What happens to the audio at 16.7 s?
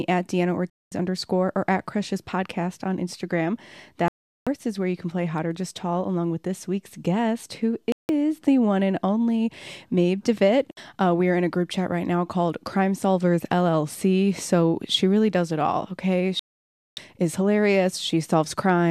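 At 16.7 s you're in a digital broadcast dropout: from 16.39 to 16.98 s the receiver lost good frames and muted, so the speech just cuts to silence for about 0.58 s.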